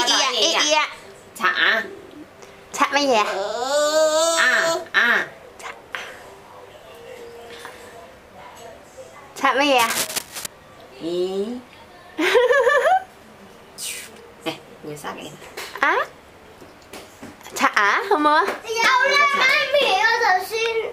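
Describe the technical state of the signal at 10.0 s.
Cable scratch noise, 9.78 to 10.46 s: dense, uneven scratching just below the sound's level, likely a worn connector moving and changing its contact resistance; ragged broadband bursts on a spectrogram.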